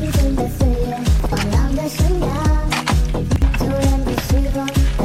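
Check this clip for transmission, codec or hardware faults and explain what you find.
Two short chunks out of order, both the same glitch. Around 1.2 to 1.32 s and again at 3.3 to 3.42 s, a 60 ms chunk plays one slot late, swapping places with its neighbour. Nothing's missing, but the reshuffle leaves three hard joins each time, so you hear a brief jumbled stutter.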